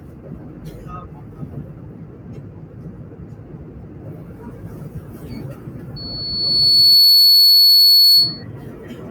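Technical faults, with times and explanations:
Throughout, noise suppressor applied to music or sounds: held tones and tails duck by roughly 20 dB and pump, because a speech denoiser treats steady sound as noise.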